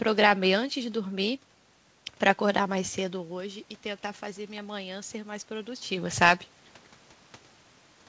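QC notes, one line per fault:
2.98 to 5.95 s, automatic gain rising: the talker moves away from the microphone around 3 s, and the level drops by about 13 dB. The gain control slowly lifts it by about 5 dB. Voice and room noise swell together, still short of the earlier level.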